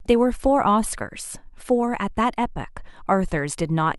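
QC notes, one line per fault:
Nothing to flag on this speech clip; it all comes through without a hitch.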